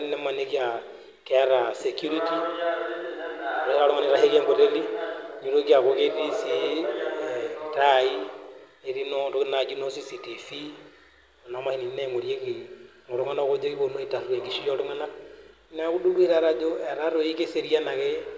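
No faults in this speech recording.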